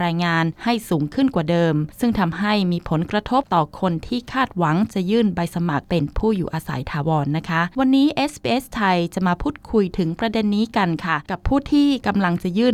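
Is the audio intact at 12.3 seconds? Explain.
Yes, the audio at 12.3 seconds is intact, with no dropout, click, distortion or other fault at that moment.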